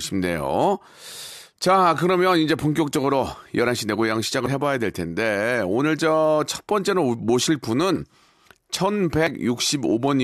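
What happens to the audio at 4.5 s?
Damaged data in a compressed stream hits at 4.46 s. The decoder reads corrupted bytes in the compressed speech, mistakes or rejects those frames, and loses sync until it finds the next valid frame header. The result is a brief chirp or blip in the speech.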